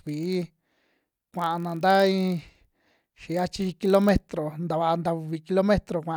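A speech clip with a block size mismatch (padded) from 0.0 to 4.3 s: each block is filled out with zeros, inserting short gaps that produce a 43.1 Hz buzz, which fits a 1024-sample read block. The timing stretches only slightly, with speed at 0.999 and pitch essentially unchanged.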